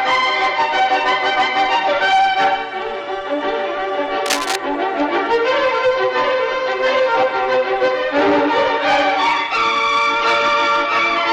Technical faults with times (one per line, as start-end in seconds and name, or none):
4.26-4.56 cable scratch noise